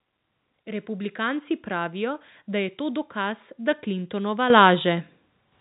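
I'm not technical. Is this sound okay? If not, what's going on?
No. At 4.5 and 5.52 seconds the microphone volume stepped up. The software raised the mic level, so the voice and the background get louder together. A speaker talking louder wouldn't lift the background.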